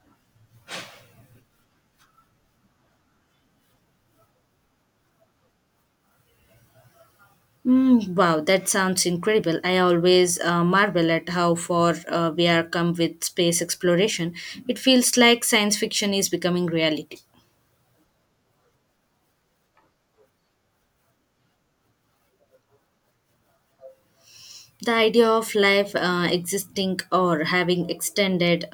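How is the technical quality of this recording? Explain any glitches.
Nothing stood out as a glitch or technical problem on listening to this recording.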